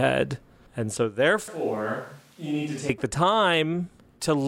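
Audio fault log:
1.48–2.89 s, switch to a distant microphone: the speech abruptly turns roomy and hollow, drops by around 10 dB, loses low end, and carries room noise roughly 30 dB below it, likely because the close microphone dropped out and a farther one took over. Unlike added reverb or a simple level dip, the thinner bass and louder background arrive and leave together with hard edges at both ends, because a more distant pickup hears the whole room.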